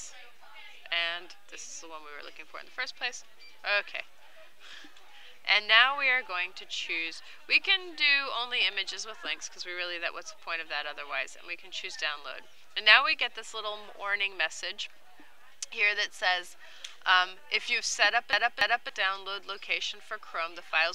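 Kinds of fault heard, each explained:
CD stuck on one turn: a scratch keeps throwing the laser back one track, so from 18.33 to 18.89 s the same 0.28 s slice of sound plays twice, each jump marked by a brief mute. That exact, evenly timed repetition sets it apart from random dropouts or smeared concealment.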